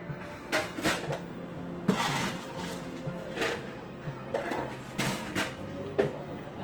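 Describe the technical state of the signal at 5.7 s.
At 5.7 s, as across the whole clip, the sound is grainy and rough, with tones turned noisy, likely from Opus compression in its music mode at a rate suggesting about 24 kbps. A spectrogram shows speckled, noise-filled bands up to about 20.3 kHz rather than clean partials.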